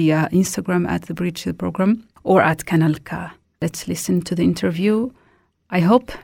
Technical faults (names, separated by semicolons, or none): none